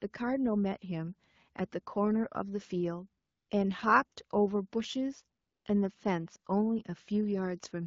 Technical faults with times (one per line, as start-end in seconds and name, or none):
3.23-3.49 AMR comfort noise
5.41-5.65 AMR comfort noise